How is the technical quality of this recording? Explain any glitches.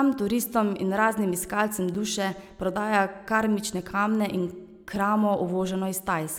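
There are two glitches in this speech recording, both a block of digital silence. At 1.95 s the audio drops out for about 5.8 ms, and at 4.96 s for about 2.9 ms. The lengths fit 256- and 128-sample buffers going out empty because the program didn't fill them in time. The sound cuts straight to silence and back without a fade, so each gap comes across as a quick tick.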